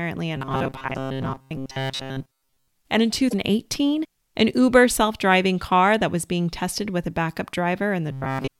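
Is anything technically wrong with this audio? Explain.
Yes, there are two faults. From 0.36 to 2.68 s, and again from 8.10 s to the end, the speech turns into a rigid, metallic buzz near 133 Hz that only roughly tracks the talking. This is robotic sound from repeated short buffers. The likely cause is audio arriving too seldom, so playback keeps looping the last chunk of about 7.5 ms. In the first stretch that covers most of the sound, and in the last half-second all of it. A spectrogram shows evenly spaced horizontal harmonic lines at multiples of 133 Hz replacing the speech's natural pitch contours, and the waveform shows identical short cycles repeating.

At 3.30 to 3.34 s, and briefly at 8.46 s, the audio jumps ahead with a short chirp, burst of noise or hole. This points to a broken MP3 bit reservoir, likely caused by lost frames. The next 24 ms frame then reads borrowed bits that belong to a different frame and decodes garbage. 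On a spectrogram each event is a narrow vertical smear or a gap that breaks the surrounding pattern. The waveform shows a sudden discontinuity.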